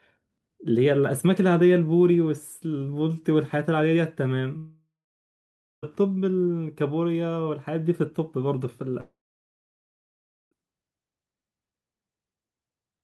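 A speech clip in which the sound breaks off twice, from 4.57 to 5.84 s and from 9.00 to 10.53 s, each time smearing into a brief fading buzz or hiss before going silent for about 0.92 s and 1.37 s respectively. This is most likely a long network dropout: the receiver stretched the last audio, then gave up. Unlike short packet loss, the gaps run over a second, and speech resumes later rather than delayed, with the missing stretch simply gone.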